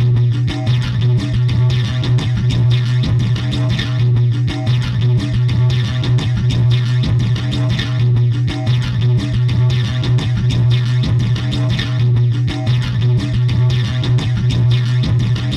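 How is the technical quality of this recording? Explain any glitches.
The sounds in this recording come through without any audible technical glitch, dropout or distortion.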